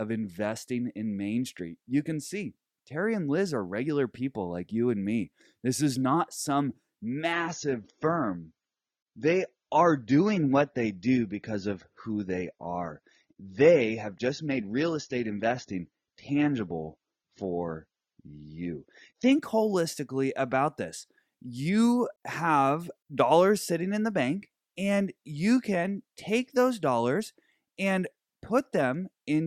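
From 7.32 s to 19.32 s the speech shifts abruptly to an adaptive stream at a lower bitrate, as the player switches down to a cheaper encoding when the connection slows, then back up. For those 12 seconds codec artefacts thicken, which fits a drop from about 96 kbit/s to 24 kbit/s AAC. Unlike a dropout or buffering stall, the switch leaves no gap or silence, only a sudden change in quality at each boundary.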